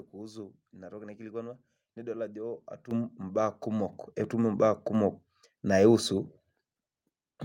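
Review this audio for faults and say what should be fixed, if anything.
Microphone volume stepped up at 2.91 s (about 10 dB) and 3.93 s (about 5 dB, just before "etum imbaak"). Speech and background jump together in single steps rather than gliding like a compressor. Turn off automatic microphone gain adjustment in the call software.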